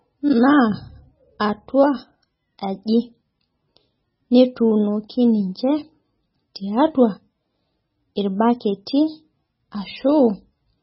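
Throughout the speech, everything above 5.6 kHz is missing and the remaining sound is heavily watery and swirly, with chirpy sibilants and smeared onsets, likely MP3 compression at a very low bitrate, consistent with about 16 kbps. A spectrogram shows a flat ceiling at 5.6 kHz and flickering gaps below it.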